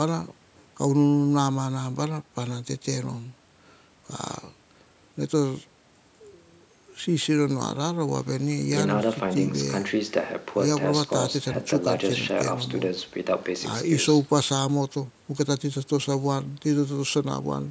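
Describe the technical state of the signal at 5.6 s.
At 5.6 s the speech is intact, with no dropout, distortion or other fault, only the expected call microphone processing, which trims the lowest bass and leaves nothing above 8 kHz.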